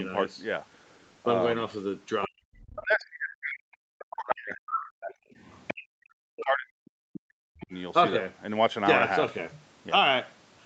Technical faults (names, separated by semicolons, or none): other side's voice leaking through; speech suppressed in double talk